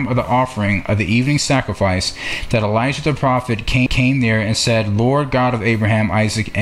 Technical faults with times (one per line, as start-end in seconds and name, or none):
3.86 CD skip